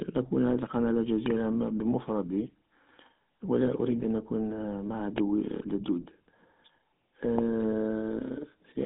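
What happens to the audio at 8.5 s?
At 8.5 s the speech sounds buzzy and gravelly, thin and boxed into a narrow telephone band with nothing above about 3.8 kHz. This is the GSM full-rate codec, present throughout: it models the vocal tract and drives it with sparse, regular pulses, consistent with 13 kbps coding.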